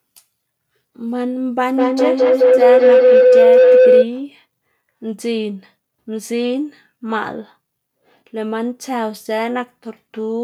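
Two devices sharing one room on the same call form a loop in this speech recording: sound leaving one loudspeaker re-enters the other microphone and comes back louder each pass. From 1.76 s to 4.13 s that loop produces feedback howl, narrowing onto a tone around 500 Hz that pulses roughly every 200 ms, the loop's round-trip delay, and swells to about 10 dB above the speech before it stops.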